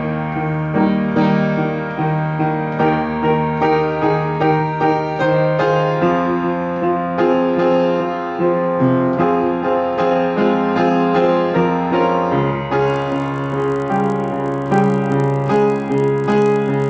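From 12.88 s to the end at 16.89 s the audio carries a buzz at 50 Hz, the signature of a resampler restarted on every block. Each 20 ms block was converted, consistent with 44.1 kHz to 16 kHz, as though it stood alone, so every block edge gets a small error and those errors repeat 50 times a second. Unlike mains hum at the same rate, this buzz starts abruptly and sounds only while there is signal.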